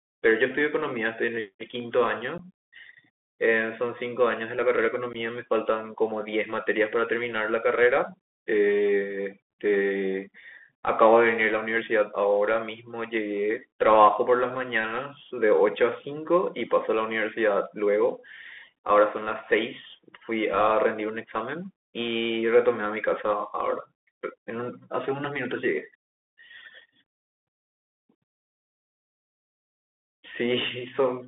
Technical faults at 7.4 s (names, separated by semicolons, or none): Bluetooth CVSD headset codec